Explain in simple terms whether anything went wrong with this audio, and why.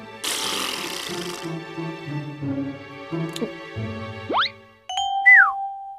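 Listening closely, nothing in this audio stood out as having gone wrong.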